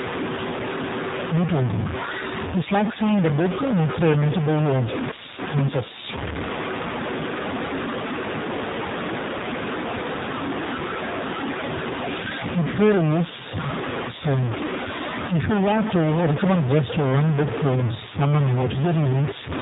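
A data bit likely stuck at one value, from a faulty line or converter, puts distortion over the speech from start to finish, with noise filling the pauses. Throughout, the AMR narrowband mobile codec rebuilds the voice from a sparse vocal-tract model, leaving a synthetic, buzzy tone, consistent with roughly 7.4 kbit/s, and nothing above 3.8 kHz.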